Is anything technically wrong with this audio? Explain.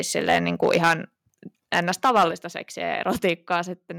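Yes. The speech has microphone overload and a microphone volume stepped down in steps.

Microphone overload occurs from 0.17 to 0.94 s, 1.73 to 2.25 s, and 3.24 to 3.55 s. Peaks have flattened tops and a harsh crackle. The input level was likely set about 10, 9 and 2 dB too hot, clipping the converter.

The microphone volume steps down at 0.88 s, 2.31 s and 3.48 s, by 3, 7 and 3 dB. Voice and background drop together. The call software likely cut input gain after each distorted peak.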